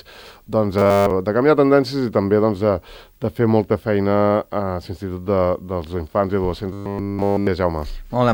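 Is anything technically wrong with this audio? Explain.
Yes, there's robotic sound from repeated short buffers at 0.78 to 1.10 s and 6.73 to 7.47 s. The audio turns into a rigid, metallic 100 Hz buzz, likely because playback kept looping a 10 ms chunk when fresh audio ran late, so essentially nothing real gets through.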